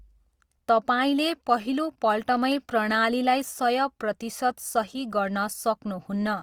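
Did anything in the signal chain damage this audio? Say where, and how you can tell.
Yes, at the codec stage. Throughout the speech there is plainly audible Opus compression damage, likely from a low-bitrate encode. Tones sound grainy and rough, not swirly. Content still reaches 20.2 kHz, which fits fullband music-mode Opus at about 24 kbps.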